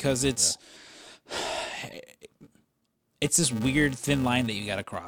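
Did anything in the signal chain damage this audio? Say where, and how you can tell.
Yes. A filter in the processing stage is restarted on every block, leaving a 345 Hz buzz throughout the speech that rises and falls with its level. That rate fits a 128-sample block at 44.1 kHz. A spectrogram shows evenly spaced vertical ticks; the waveform shows a small transient at each block start.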